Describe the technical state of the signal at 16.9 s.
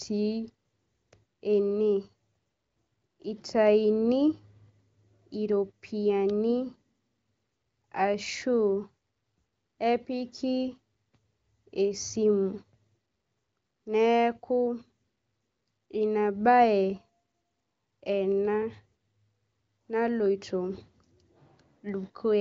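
At 16.9 s the speech is intact, carried by the AMR wideband (HD Voice) codec at 23.05 kbit/s with its band ending near 7.6 kHz, and no fault can be heard at that moment.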